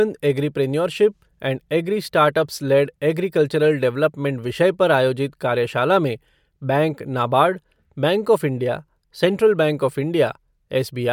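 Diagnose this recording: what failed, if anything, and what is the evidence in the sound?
Nothing failed here that I can hear; every stage of the chain seems to have done its job on this bit of speech.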